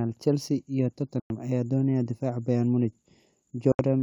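At 1.20 s and again at 3.72 s the speech cuts to silence for about 100 ms and 73 ms, a Bluetooth dropout, likely from packets arriving too late for the headphones. Each gap has abrupt or briefly faded edges, and the speech resumes further along, as though it had kept playing.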